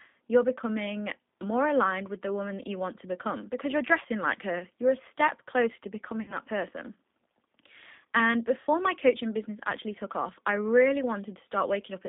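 Speech passed through the G.729 codec at 8 kbit/s. It rebuilds each 10 ms frame from a vocal tract model, a pitch predictor and a few pulses, so the voice sounds rough and faintly synthetic, with plainly audible codec damage and a narrow line band from about 200 Hz to 3.7 kHz. VoIP packet loss concealed by the speech codec then drops about 60 ms of audio twice, which fits two lost packets each time. The decoder fills each gap by extending its last pitch and filter at falling gain. From 6.22 to 6.35 s the sound smears into a fading buzzy tone or coloured noise and stays weak after the stream resumes, because each rebuilt frame carries the previous one's error. The same smear and slow recovery recur from 8.61 to 8.67 s.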